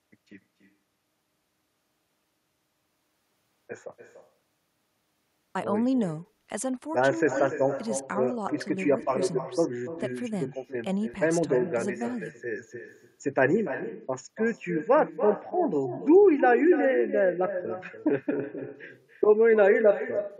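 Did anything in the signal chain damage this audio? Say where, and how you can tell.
Yes: throughout, every phrase is shadowed about a third of a second later by a thinner copy about 11 dB down. It is echo with no canceller in call processing.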